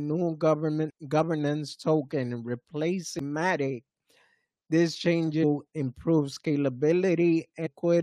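Damaged data in a compressed stream shows up four times: at 0.89 s, at 3.19 s, from 5.42 to 5.44 s, and from 7.65 to 7.67 s. Each is a short chirp or blip of 10 to 22 ms. At these points bytes in the encoded stream are corrupted, so the decoder misreads the affected frames, loses its place in the bitstream and has to hunt for the next valid frame header before the sound resumes cleanly.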